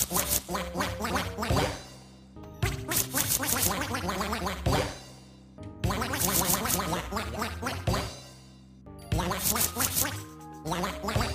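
Between 9.25 and 10.66 s the audio carries CD scratch ticks: seven evenly spaced ticks of a few milliseconds, one per disc turn, unlike the random timing of vinyl crackle.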